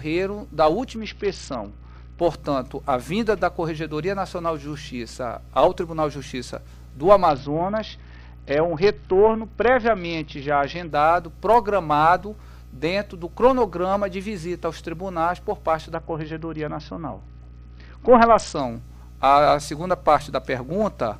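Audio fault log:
0.96–2.20 s, 7.29–10.91 s and 15.94–18.60 s: Bluetooth SBC bit pool drop. In each stretch the top end goes dull and a gritty noise rises under the sound. Full clarity returns at each end point. The link was squeezing the SBC encoder's bit budget, consistent with a drop from a bit pool of 31 to about 7, near 61 kbps. The highest sub-bands got few or no bits and the rest were coarsely quantised.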